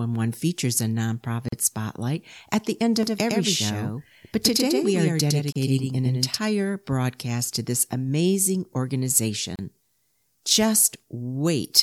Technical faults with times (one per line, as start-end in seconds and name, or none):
1.48-1.52 gap at a join of encoded pieces
3.03-6.38 doubled audio track
5.52-5.56 gap at a join of encoded pieces
9.56-9.59 gap at a join of encoded pieces